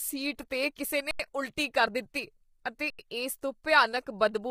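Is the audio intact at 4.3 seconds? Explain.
No, low-delay AAC compression runs through the whole clip, 4.3 s included. The speech sounds rough and grainy, likely from AAC-ELD at a low bitrate near 24 kbps. A spectrogram shows noise filling gaps between harmonics and nothing above 15.6 kHz.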